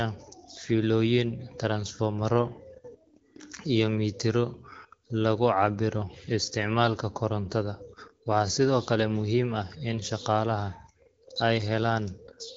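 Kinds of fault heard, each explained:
No faults detected in this speech recording.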